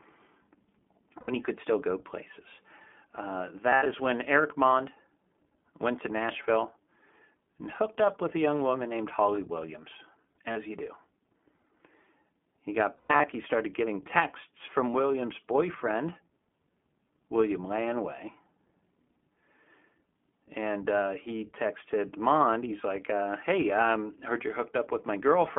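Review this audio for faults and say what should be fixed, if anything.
iLBC codec, throughout: the speech is confined to roughly 200 Hz to 3.5 kHz and carries a plainly audible rough, synthetic texture. This fits iLBC at its 15.2 kbps mode, which codes each 20 ms block's excitation on its own. Preventing this means carrying the call on a wideband codec such as Opus wherever the link permits.

Lost iLBC frames at 1.20–1.30 s (before "you could still go"), 3.70–3.87 s, 10.52–10.57 s (before "you do") and 12.96–13.26 s (before "he started getting texts"). Each gap becomes a held, buzzy vowel as the decoder repeats the last pitch cycle with added noise, and clean speech resumes immediately afterwards. Adding forward error correction or redundant packets on the network path would prevent these dropouts.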